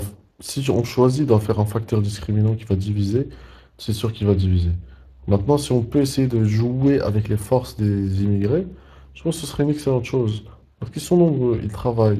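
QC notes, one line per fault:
Throughout: Speex codec damage, plainly audible. The speech has a hoarse, grainy roughness because too few bits describe the excitation. The bitrate is near 22 kbps. This is CELP buzz rather than the swirly, watery smearing of transform codecs.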